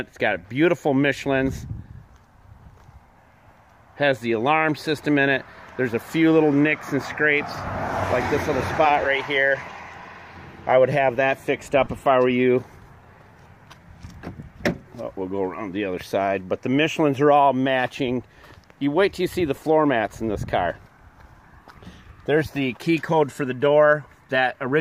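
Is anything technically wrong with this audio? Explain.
Yes. There are two brief dropouts from lost LE Audio frames, at 11.85 s and 19.56 s, each about 15 ms long, which fits two consecutive 7.5 ms LC3 frames going missing. For each gap the decoder rebuilds audio by reusing the last good spectrum with randomised signs. That keeps the level and tonal balance but scrambles phase, so any tonal content briefly turns into a short noisy smear. The gaps are too short for the fade toward silence to take hold.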